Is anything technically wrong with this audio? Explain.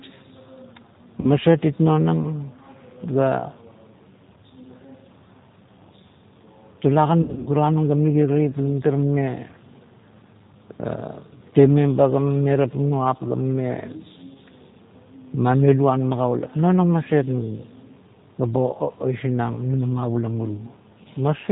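Yes. The whole recording has passed through a G.729 codec at 8 kbit/s, and it has two packet-loss gaps that the codec had to conceal.

The G.729 codec damage is plainly audible from start to finish. Each 10 ms frame is rebuilt from a vocal-tract filter, a pitch predictor and a few sparse pulses, and that gives the speech a rough, slightly synthetic edge. Nothing gets through above 4 kHz, so a spectrogram shows a hard ceiling there with empty space above it.

VoIP packet loss concealed by the speech codec shows up at 1.21–1.30 s, where about 30 ms of audio is missing, and again at 7.22–7.49 s, just before "nung ga". The second event totals about 180 ms, scattered over 240 ms, and its longest single run is 60 ms. In both places the decoder repeats its last pitch and filter settings while turning the gain down. The result is a stretched, buzzy tone or coloured noise that fades away. On a spectrogram the harmonics flatten into smeared, steady bands, and on the waveform the level sags and takes a short while to recover.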